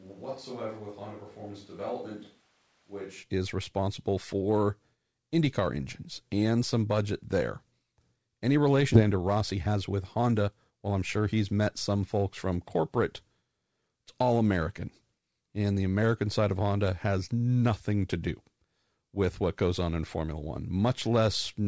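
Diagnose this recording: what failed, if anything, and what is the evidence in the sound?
From the start of the clip until 3.22 s, just before "is responsible for", the speech sounds roomy and hollow, thin in the bass, about 10 dB quieter, with room noise only about 30 dB below the speech. This is a switch to a distant microphone, likely at the capture stage when the close microphone's feed dropped out and a far pickup carried the signal. Reverberation and noise rising together, then snapping back at 3.22 s, separates this from a simple gain drop, which would lower level without adding room sound.

At 8.94 s the audio skips ahead: about 0.7 s of speech is missing, and the two sides are butted together with no silence or concealment fill between them. This is a network and jitter-buffer fault. A backlog of waiting audio was discarded, so latency fell by roughly the same 0.7 s. Unlike packet-loss concealment, nothing is synthesised, and unlike a dropout there is no gap. 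Playback simply resumes later in the speech.

From 9.03 to 11.16 s, ending before "he's met some folks", the speech runs at about 114% speed with its pitch unchanged, so it sounds hurried. This is jitter buffer speed-up in the receive buffer: after the backlog, the receiver trimmed short pitch-period chunks many times over, removing about 0.3 s in total. Steady pitch rules out a sample-rate mismatch, which would raise pitch along with tempo. The G.722 call path band-limits everything to 8 kHz.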